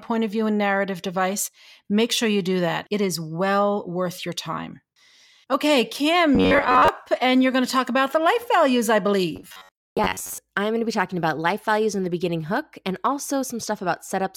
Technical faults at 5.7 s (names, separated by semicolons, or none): none